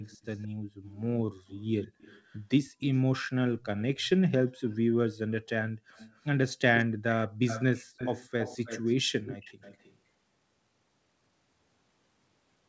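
Speech with an echo leak: a delayed copy of the voice returns at 0.03–0.48, 0.83–1.01, 1.47–3.0, 3.61–4.09, 4.7, 5.68–6.26, 6.75 and 7.25–9.97 s. It trails by 166 ms, then 217 ms, then 316 ms, varying between about -35 and -10 dB relative to the speech. The likely cause is a speakerphone whose echo canceller lets through part of its microphone pickup.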